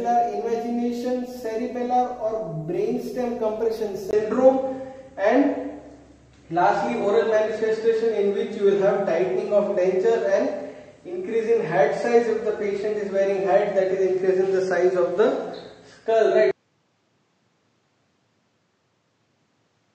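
At 4.11 s the sound drops out for about 20 ms and then returns duller and boxier, with nothing above 8.7 kHz, a level shift of roughly 5 dB and a faint new background noise, all lasting to the end. This is most likely an input switched to a poorer device. A filter or codec bandwidth drop would only narrow the band, but here the gap, tone, level and noise floor all change together at one instant.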